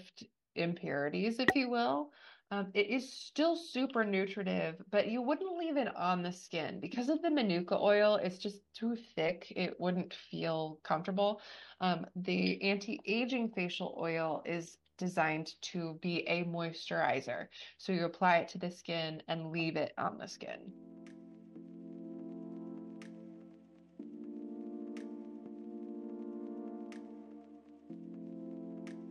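From 7.03 s to the end, a video or display buzz sits faint and well below the audio, carrying on unbroken once it starts. A screen or its cable is coupling interference into the audio path, so the buzz repeats at the picture's field rate of 75 Hz with a gritty hash riding above it. That 75 Hz fundamental is what separates it from mains hum, which would sit at 50 or 60 Hz and its harmonics.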